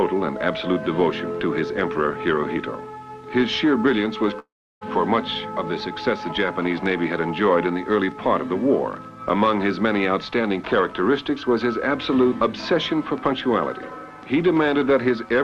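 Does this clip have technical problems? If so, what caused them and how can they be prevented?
Yes. From 4.39 to 4.83 s the sound smears into a fading buzz and then drops to near silence for about 330 ms before resuming with roughly 420 ms missing. This is likely a long network dropout, where the receiver extended the last audio because nothing arrived. A more stable connection and a larger jitter buffer would help prevent it.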